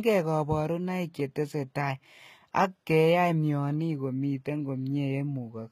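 A speech clip with plainly audible damage throughout. The treble sounds bright but false. S sounds turn gritty and metallic, and the upper harmonics don't line up with the lower ones. This is likely HE-AAC compression, which rebuilds the top octaves from copied lower bands, and the damage points to a low bitrate around 20 kbps.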